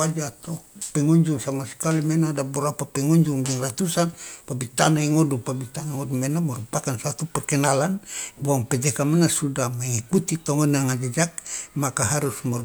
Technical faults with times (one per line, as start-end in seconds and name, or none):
none